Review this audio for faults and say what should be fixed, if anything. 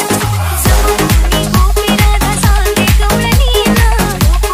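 No faults turned up in this audio, so nothing needs to be fixed.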